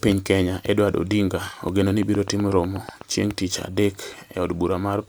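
Right after "ogeno ni", from 2.03 to 3.02 s, there's a train of clicks: about ten near-identical pops at a steady 8.1 per second, poking roughly 10 dB above the speech, likely interference from nearby equipment. It clears by "chieng' tich adek".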